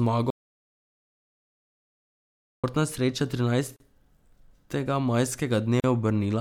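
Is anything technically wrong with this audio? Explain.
Yes, the speech has two problems.

Audio dropout to silence: from 0.30 s to 2.64 s, about 2.3 s of speech is lost. The sound cuts off abruptly and returns mid-flow, with complete silence in between and no room tone. The input was likely lost, perhaps through a disconnected device, a failed link or a mute, while the recorder kept writing zeros. The waveform shows a flat line, and the spectrogram an empty black band.

Gap at a join of encoded pieces: silences of about 38 ms open at 3.76 s and 5.80 s, about 2.0 s apart, each time in continuous speech. The sound was encoded in separate 2-second pieces and joined without trimming, so the start delay and end padding from each encoder run remained. Each gap is a brief hitch, after which the speech carries on where it stopped. On a spectrogram these appear as thin vertical empty slivers with smeared edges.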